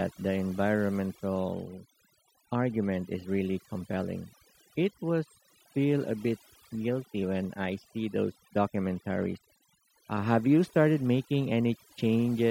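Throughout, overdone noise removal suppresses bands near the noise estimate, leaving near-silent gaps with twinkling specks, visible on a spectrogram as patchy, holed time-frequency regions.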